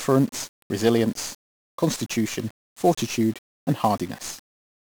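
From start to finish the speech carries 1-bit DFPWM compression damage, and it's heavy. Each sample only nudges an adaptive level up or down, so broadband quantisation noise smothers everything. Voices turn fuzzy and crackly, treble sinks into hiss, consistent with roughly 48 kbps DFPWM.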